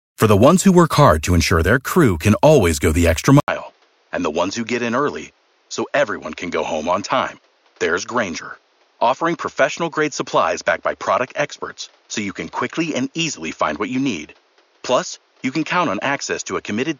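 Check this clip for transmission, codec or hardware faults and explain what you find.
One fault: from 3.4 s, right after "always go the extra", the input was likely switched to a poorer device. An 80 ms gap marks the switch. Afterwards nothing comes through above 6.9 kHz, so the speech turns duller and boxier, about 5 dB quieter, with new background noise roughly 35 dB down.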